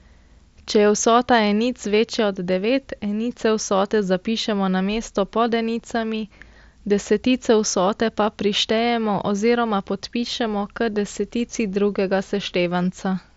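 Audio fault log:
Nothing stood out on listening to this speech, which comes through a Bluetooth mSBC headset link.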